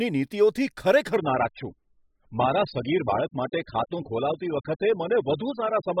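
From 1.16 s to the end, the speech abruptly turns dull and papery with no gap: nothing remains above about 5.1 kHz, and the upper range takes on a smeared, watery coding texture. This is an adaptive stream at a lower bitrate. A slowed connection made the player switch mid-stream to a far leaner encoding, and the sudden loss of detail fits a fall from roughly 96 kbit/s AAC to around 8 kbit/s.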